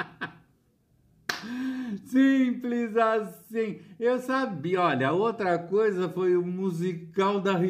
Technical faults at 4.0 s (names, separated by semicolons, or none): none